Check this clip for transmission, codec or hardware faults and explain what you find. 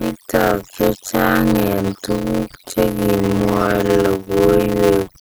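Two faults run through the whole clip: overdone noise removal, and a block size mismatch with zero padding.

Overdone noise removal: the background falls to near silence dotted with twinkling specks. The denoiser, set far too strong, shuts off individual frequency bands whenever they come close to its noise estimate, taking the quieter parts of the speech with them. Low-bitrate codec damage would also smear transients and warble steady tones. Here the loss follows level, clearing the gaps and the soft edges of the speech.

Block size mismatch (padded): a steady buzz at 91.9 Hz sits under everything, and the speech plays at 0.533 times normal speed while keeping roughly its normal pitch. One stage writes 256-sample blocks, and the next reads larger blocks with the remainder filled with zeros. That fits a read size of about 480 samples at 44.1 kHz. Each block therefore carries a short silent gap, which buzzes at the block rate and stretches the timing. 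Random packet dropouts would produce irregular holes and leave the pace unchanged. A resampling error would move the pitch along with the speed.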